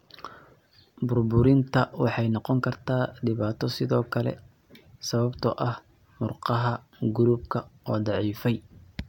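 Nothing technical stands out in this speech recording; no fault can be heard anywhere in it.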